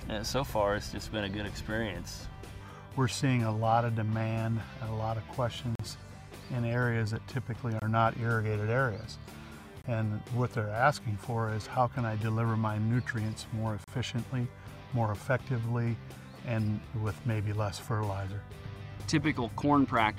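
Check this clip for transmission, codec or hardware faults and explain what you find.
Gaps between stream segments occur four times: at 5.75 to 5.80 s (about 41 ms), 7.80 to 7.82 s (24 ms), 9.82 to 9.84 s (24 ms) and 13.84 to 13.88 s (34 ms). They fall on the boundaries of 2-second segments, where the time stamps leave a small hole that the player fills with silence. Each one is a brief, hard-edged dropout in the sound. Nothing is lost, and the audio resumes exactly where it stopped.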